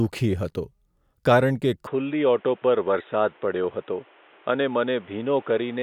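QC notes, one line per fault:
1.87 s to end: input switched to a poorer device. Right after "કારણ કે" the speech turns dull and boxy with no gap or level jump. The band narrows, and a faint new background noise sits about 30 dB below the speech, likely from a narrower-band microphone.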